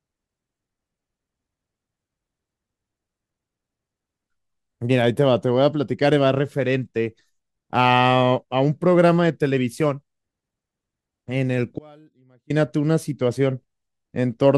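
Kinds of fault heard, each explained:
Audio dropout to a faint residue: the speech cuts out abruptly for about 0.71 s, leaving only a faint trace roughly 30 dB down, likely a signal-path interruption with the downstream chain still live.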